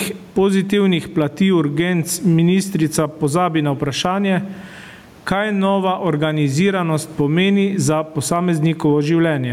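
Speech with gain pumping all the way through: the room noise sits about 39 dB under the talker, and the gain swings by roughly 15 dB, likely from gain set too high with a fast limiter clamping down.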